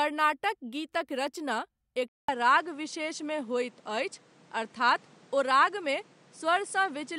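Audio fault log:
2.08–7.19 s input switched to a poorer device: after a 200 ms silence, the speech loses everything above 10.2 kHz and gains a faint new noise floor at much the same level, likely from a change of microphone.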